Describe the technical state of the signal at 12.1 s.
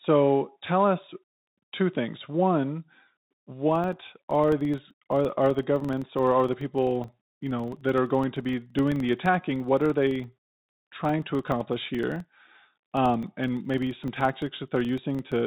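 A filter restarted on every block is at work at 12.1 s, part of a stretch running from 3.71 s to the end of the clip. Each block starts processing from zero state instead of carrying over the previous block's memory, so every block boundary throws off a small transient. These repeat at about 23.4 Hz, which fits a 2048-sample block, and are heard as a low buzz or rapid ticking riding on the speech and growing louder with it.

The Bluetooth CVSD headset codec is also present here, as it is throughout, and its damage is plainly audible. The encoder sends a single up-or-down bit per sample, consistent with a 64 kbps stream, and adapts its step size as it goes, so loud, fast-changing high content outruns it and distorts. Nothing above 4 kHz survives, the sibilants sound scratchy, and a granular hiss sits beneath the speech.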